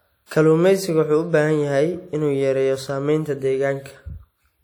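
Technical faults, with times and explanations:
Throughout: WMA compression damage, plainly audible. The speech has a ringing, washy quality, and a hiss that swells and fades with the signal. Quantisation noise smeared over long transform blocks is the likely cause, fitting a bitrate near 48 kbps. Nothing is heard above 19.7 kHz.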